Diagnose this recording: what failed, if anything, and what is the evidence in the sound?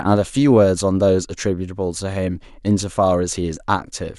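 Nothing failed in this speech recording. There is no evidence in the sound pointing to a problem at any stage.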